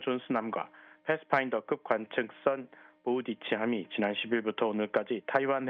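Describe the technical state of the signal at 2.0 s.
At 2.0 s the signal is intact, with no dropout, click, distortion or other fault, and only the ordinary coding character of the call path it passed through.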